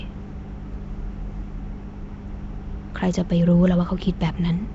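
Nellymoser compression runs throughout the speech, with nothing above 7.7 kHz and a rough, hissy halo over a smeared, underwater tone. The likely cause is Flash's Nellymoser Asao codec, which gives weak bands no bits and fills them with noise, consistent with about 32 kbps.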